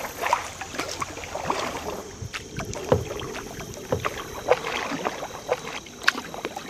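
From 2.75 s to 5.79 s a doubled audio track appears: a full-band copy about a second late and roughly 5 dB quieter, likely from a second, slower capture path. It starts and stops abruptly, showing as a fainter duplicate of the waveform and spectrogram, offset in time.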